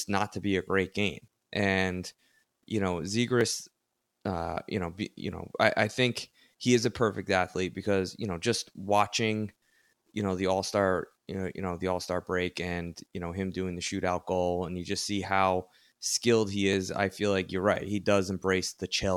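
Single sharp clicks at 3.41 s after "you know", 6.85, 13.87, 16.73 and 17.76 s: dropped samples, likely under a millisecond lost each time, making the waveform jump abruptly.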